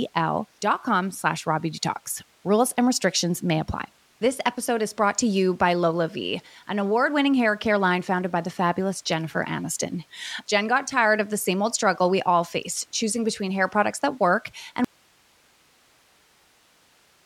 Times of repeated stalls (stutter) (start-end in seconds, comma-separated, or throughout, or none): none